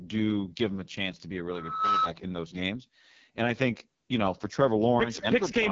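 The speech runs through an AMR wideband (HD Voice) codec at what sounds like its lowest mode, which fits about 6.6 kbit/s. At that rate the encoder's pulse-driven vocal tract model has too few bits to track the voice, and the band from 6.4 to 7 kHz is filled with shaped noise. The result is heavy damage across the whole clip: a rough, raspy texture, with no content at all above 7.5 kHz.

From 1.49 s to 2.10 s a loudspeaker feedback squeal breaks in. A microphone is picking up the loudspeaker it feeds, and at 1.3 kHz the loop gain has passed one, so that frequency reinforces itself on every trip around. It swells over a little under half a second into a steady whistle sitting about 5 dB above the speech, then stops at 2.10 s.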